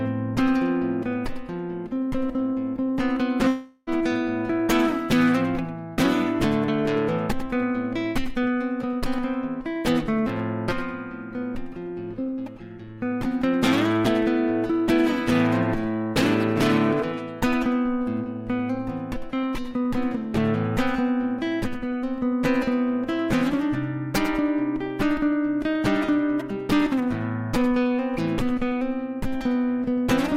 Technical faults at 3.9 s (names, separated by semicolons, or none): long network dropout